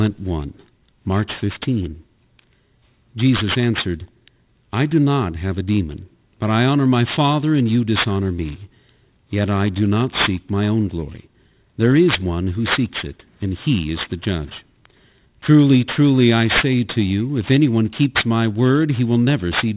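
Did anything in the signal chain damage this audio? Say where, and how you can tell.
Yes. Aliasing runs throughout the speech, from the sample-rate conversion stage. Sibilants turn gritty and metallic, folding back around 4 kHz, which fits a drop from 48 kHz to 8 kHz without anti-alias filtering, with the mirrored energy sitting roughly 10 dB below the speech.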